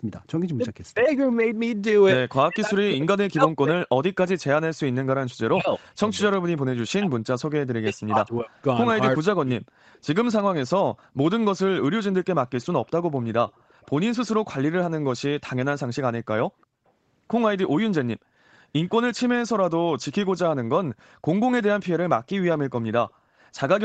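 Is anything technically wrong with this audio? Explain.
Yes. Two kinds of fault affect this speech recording.

Speech suppressed in double talk occurs at 0.58–1.07 s, 2.48–3.78 s, 5.51–7.11 s, 7.83–8.57 s and 9.17–9.63 s. The echo canceller, likely confused by both sides talking at once, turns the talker down as well as the far end. Each time the speech dips by up to roughly 40 dB or breaks into pieces.

An echo leak is heard at 9.93–9.99 s and 13.49–13.87 s. Residual loudspeaker pickup, likely left by an incomplete echo cancellation, returns as a faint delayed copy about 359 ms late, roughly 35–40 dB below the speech.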